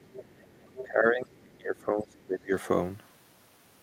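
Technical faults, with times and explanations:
0.0–0.85 s, other side's voice leaking through: a second voice sits underneath the speech, about 20 dB below it. The far end is likely being played on the talker's loudspeaker and picked up again by the microphone, with the echo canceller leaving a residue instead of removing it fully.
0.83–2.52 s, speech suppressed in double talk: the talker's level sinks across this span, dipping by as much as about 25 dB, with roughly a second and a half of the passage affected. The likely cause is both sides talking at once, so the echo canceller cannot tell the near talker from the loudspeaker echo and turns everything down together.
1.78–1.85 s and 2.20–2.25 s, other side's voice leaking through: two faint scraps of the far voice, about 35 dB below the speech, slip through during the suppressed stretch. These are likely short fragments of uncancelled loudspeaker echo escaping the same canceller.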